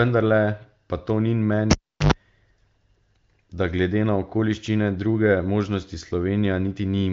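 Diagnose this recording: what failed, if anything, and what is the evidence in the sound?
At 1.71 s the speech breaks with a sharp pop and drops to near silence for about 370 ms, interrupted by roughly 95 ms of low, hard 50 Hz buzz. A second pop at 2.12 s marks the speech returning. This is a cable pulled and plugged in, a fault in the analogue wiring. The live lead was withdrawn and reinserted. The buzz is mains hum picked up while only the plug's tip made contact, before the ground connection closed. Throughout, the speech carries the narrow top end of an AMR wideband (HD Voice) link, with nothing above about 7.5 kHz, consistent with its high-rate 23.05 kbit/s mode.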